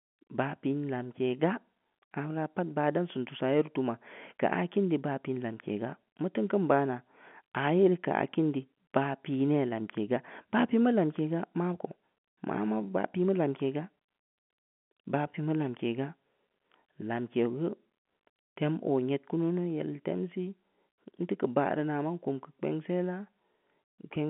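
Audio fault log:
Nothing stood out on listening to this telephone-band speech, which carries G.711 coding with no content above about 3.8 kHz.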